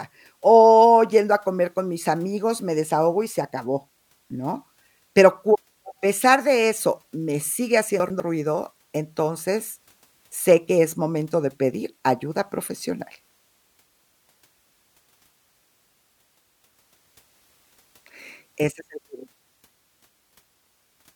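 Speech, with a brief jumbled moment from 8.0 to 8.2 s caused by chunks out of order. Two consecutive 100 ms blocks of audio swap places: the block that should come first arrives one chunk late and plays after its successor. No audio is missing, but the sequence is scrambled, and the three abrupt splice points around that 200 ms stretch come with a garbled sound.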